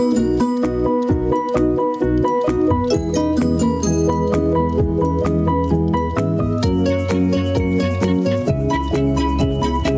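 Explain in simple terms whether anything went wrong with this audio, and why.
Something's off the whole way through. There's gain pumping: the level keeps getting pulled down every time something loud comes in, so it seems to breathe. The likely cause is the input gain set far too high for the microphone, with a fast limiter or compressor yanking it back down on each loud moment. That squashes the loud and soft parts together, so everything sounds flattened. The call path's top end stops around 8 kHz.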